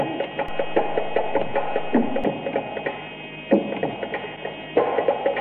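At 0.48 s the waveform's zero line shifts suddenly, whether from a converter recalibrating or from an input carrying an offset being switched into the path. This DC step, about -27 dBFS in size, holds until 2.24 s, when the baseline returns. The jump is heard as a low thump or click at 0.48 s, while the sound itself carries on unchanged through the offset span.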